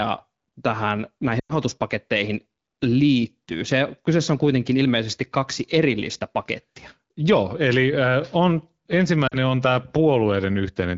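At 1.39 s the speech drops to near silence for about 0.14 s, and at 9.28 s it briefly drops out just before "on tämä". These are lost AMR speech frames, with the decoder repeating its last good frame at falling gain.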